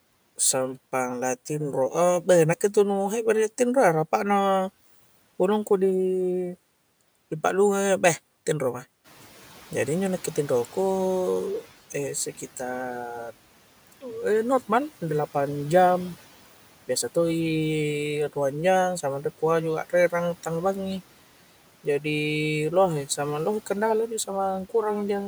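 Speech, with room noise that jumps by about 11 dB around 9 s and then sits about 24 dB below the voice. From 9.04 to 11.71 s the noise suppressor is catching up. The louder noise passes through with less reduction at first, then sinks smoothly over 2.67 s to about 9 dB lower as the suppressor's noise estimate adapts. That steady glide sets it apart from a gate's abrupt switching or a genuine drop in room noise.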